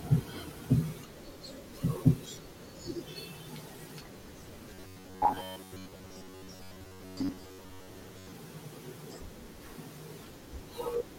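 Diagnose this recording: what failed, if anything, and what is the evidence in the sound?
Driver or buffer stage: robotic sound from repeated short buffers at 4.74–8.34 s, a metallic 93.8 Hz buzz, likely from an 11 ms segment looped repeatedly.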